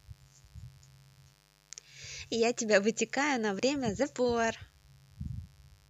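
A steady, raspy mains buzz runs under this speech from start to finish, built on 50 Hz with harmonics climbing into the kilohertz range, sitting roughly 35 dB below the voice. On a spectrogram it shows as evenly spaced horizontal lines at 50 Hz multiples across the whole clip.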